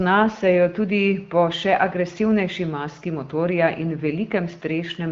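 No faults heard; the speech sits in an AMR wideband (HD Voice) band with nothing above about 7.5 kHz and the clarity of a higher AMR-WB rate, around 15.85 kbit/s, which is normal for that path.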